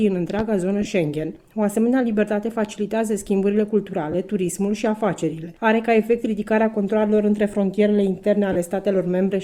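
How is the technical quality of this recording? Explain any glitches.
The recording has two kinds of glitch: one loud pop near the start and three short Bluetooth dropouts. Light lossy compression also shows faintly.

Loud pop, 0.39 to 0.42 s: a sharp thump about 10 dB above the sound, which carries on underneath. It was likely a voltage spike from a plug or switch. On the waveform it appears as a tall narrow spike, and on the spectrogram as a bright vertical stripe.

Lost LE Audio frames at 0.81 to 0.88 s, 4.12 s and 8.52 to 8.56 s: about 37 ms, 22 ms and 30 ms went missing. The first loss is scattered over 60 ms, with its longest gap around 15 ms. The decoder filled each gap with the last spectrum under random signs, which turns tones into a brief noisy smear. On a spectrogram these show as blurred, grainy patches where the harmonic lines dissolve.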